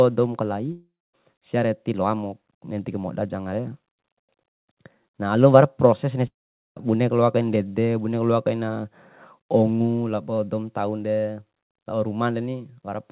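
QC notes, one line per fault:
0.72–1.15 s, long network dropout: about 0.42 s of audio never arrives. The receiver stretches the last sound into a short buzz that fades, leaving roughly a quarter second of silence before the audio returns further on with the lost part skipped. The likely cause is a run of packets lost in transit, with concealment giving up once it has nothing new to build on.
6.27–6.82 s, long network dropout: after "proses na" about half a second is gone, and the audio resumes at "boneku loakaina ndede". The concealment fades almost at once, so nearly all of the gap, about 0.46 s, is silence. This is likely another burst of lost packets. The audio on both sides stops sharply at 4 kHz, which fits a G.711 mu-law call path.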